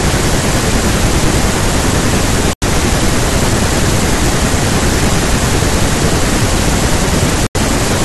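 At 2.53 s and 7.47 s the speech drops to silence for about 88 and 85 ms, then resumes. This is likely a Bluetooth stall, with the buffer running dry.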